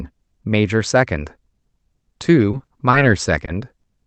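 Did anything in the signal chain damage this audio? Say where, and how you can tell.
Yes, at the network stage. Repeated packet loss between 2.51 and 2.95 s: four gaps, longest 40 ms, each concealed by extending prior audio, leaving choppy, robotic sound.

Short concealed packet loss at 3.45–3.49 s and 3.81–3.85 s on the Opus call path: the decoder bridged each 20 ms hole, causing a brief smear or wobble.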